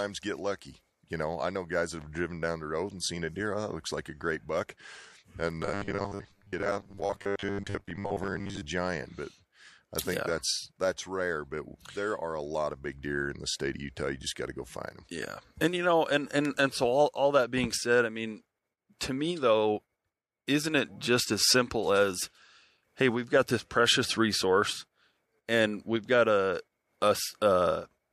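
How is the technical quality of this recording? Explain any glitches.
The recording has two distinct glitches: a stretch of robotic buzzing and a brief pre-echo on one attack.

From 5.63 to 8.66 s the speech turns into a rigid, metallic buzz at 100 Hz that still loosely follows the words. This is robotic sound from repeated short buffers. Incoming audio likely arrived too slowly, so playback kept looping the last 10 ms segment to fill the gaps. Roughly half the material there is repetition rather than new audio, and the 10 ms loop length is what imposes the fixed 100 Hz pitch.

At 18.99 s, between "being said I mean" and "to me though", there is pre-echo: a short hiss of about 19 ms leading into a sharp attack, with the noise rising about 10 dB above its surroundings. The transform codec spread its quantisation noise across the whole block, including the quiet moment before the transient. 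This fits a block of about 36 ms with no switch to short blocks, which leaves the attack sounding softened and smeared.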